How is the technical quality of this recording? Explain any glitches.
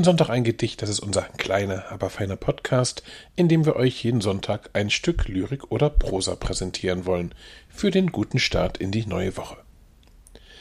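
No audible glitches or faults.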